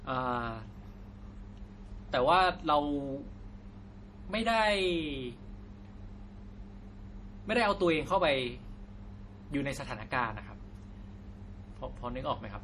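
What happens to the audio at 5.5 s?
At 5.5 s, as throughout the clip, the speech sounds watery and swirly, with smeared consonant attacks and nothing above 14.7 kHz. The likely cause is MP3 compression at a low bitrate, around 40 kbps, where starved frequency lines flicker between frames and the treble is cut.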